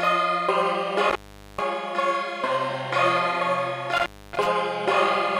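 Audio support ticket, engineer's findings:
Intermittent contact at 1.09–1.61 s and 3.92–4.47 s. Signal drops out with crackle at the edges of each gap, faint hiss while open: roughly 0.43 s open in the first event, 0.27 s in the second. Probable component: loose cable or plug. Mechanism: conductor briefly loses contact, breaking the signal circuit; scraping make/break at the connector produces the edge crackle. Reseat or replace the connector and cable.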